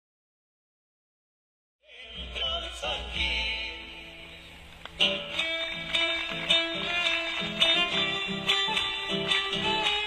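Damaged data in the compressed stream makes the decoder misread frames and lose sync, producing short blips at 2.37–2.43, 2.79–2.84, 6.04–6.09, 7.71–7.77 and 8.64–8.69 s. The second lands just after the fade-in, which starts around 2 s and completes at 2.78 s.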